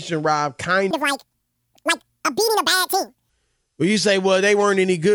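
From 0.91 s to 3.29 s the speech suddenly goes chipmunk: twice as fast and a full octave higher (12 semitones), then drops back to normal. That's a classic wrong sample rate fault. The samples are being run out at double the rate they were captured at, with no conversion, so speed and pitch jump together by the same factor of two. That fits 24 kHz audio being played back as if it were 48 kHz.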